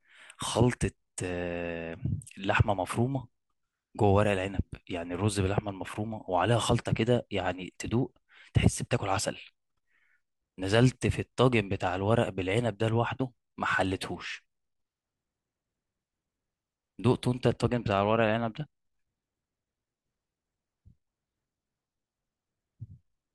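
No audible technical faults present.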